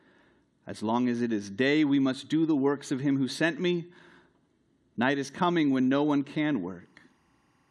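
From 5.81 s, just after "is coming", and running to the end of the clip, there is timecode bleed: linear timecode from an adjacent line has leaked into the speech path. Its square wave flips between two pitches an octave apart, around 1 and 2 kHz, at a rhythm that fits 24-frame code, giving a steady chirping warble about 45 dB below the speech. A spectrogram shows narrow bands near 1 and 2 kHz switching back and forth. The waveform barely shows it.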